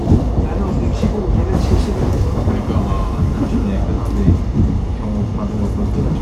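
No technical faults are audible.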